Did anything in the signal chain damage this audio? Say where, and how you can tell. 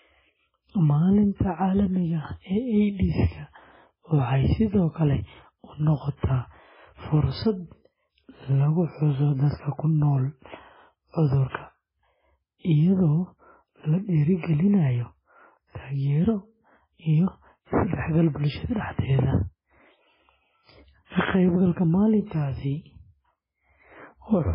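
Yes, at the codec: the speech is watery and swirly throughout with nothing above 5.3 kHz, most likely heavy MP3 compression at a very low bitrate, around 16 kbps.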